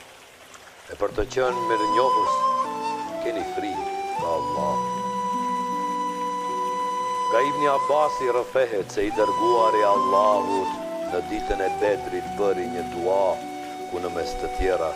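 No technical faults can be heard anywhere in the clip. Nothing in the audio breaks up, drops out or distorts at any point.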